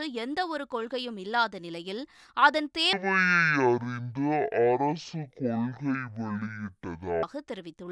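A wrong sample rate fault runs from 2.93 to 7.23 s. Over that stretch the speech plays at half speed and drops by 12 semitones, a full octave, with tempo and pitch falling together. The samples are being played out at a rate far below the one they were captured at, with no resampling in between. A halving like this fits speech recorded at 44.1 kHz and played back at about 22 kHz.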